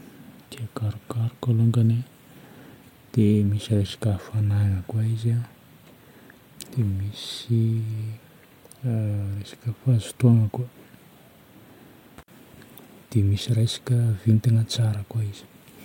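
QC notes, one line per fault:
No faults found on review. Nothing in the audio calls for a note.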